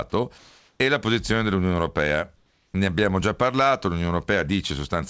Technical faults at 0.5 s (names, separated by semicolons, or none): comfort noise in place of the background